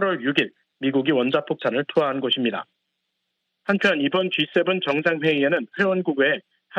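Clock slip clicks run from 0.12 s to 6.74 s: about a hundred single-sample ticks at roughly 70 ms intervals. Likely two free-running clocks disagreeing by a few hundred parts per million, dropping or repeating a sample each time.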